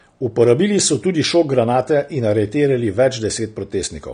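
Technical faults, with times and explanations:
Throughout, AAC compression: nothing is present above 9.7 kHz, so the speech loses its top end, and codec damage is plainly audible. The likely cause is AAC-LC coding, which fits a rate of 32 kbps. A spectrogram shows a hard, flat ceiling at 9.7 kHz.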